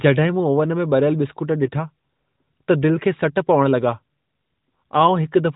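From 1.64 to 1.76 s, AMR bit errors hit what sounds like five frames at a few percent error, misplacing pulses so the speech turns briefly hoarse and gargly.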